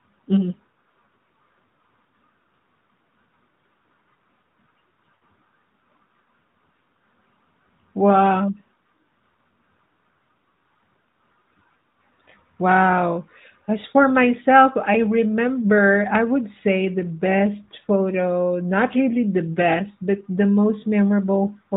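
Lost AMR speech frames at 5.16 to 5.24 s: a short run of frames failed to arrive intact, and the decoder covered the gap by repeating the last good pitch and vocal tract settings at falling gain. The result is a brief drawn-out smear of the speech that sags in level. Its 60 ms length fits three consecutive 20 ms frames. The stream is narrowband AMR, so nothing above 4 kHz is present on either side of the dropout.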